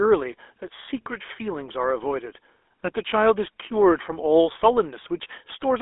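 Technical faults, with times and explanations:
Throughout, GSM full-rate codec: the speech has a buzzy, gravelly roughness, and nothing survives above about 3.8 kHz inside a narrow line band of roughly 300 Hz to 3.5 kHz. The codec models the vocal tract and rebuilds the excitation from sparse, regularly spaced pulses, which gives the grating texture, consistent with a 13 kbps full-rate coder. Plain telephone band-limiting would sound muffled but smooth, whereas this roughness comes from the coding itself.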